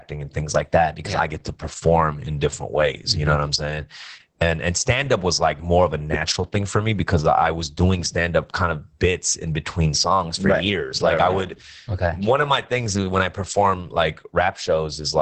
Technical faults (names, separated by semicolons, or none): Opus voice compression; drift correction step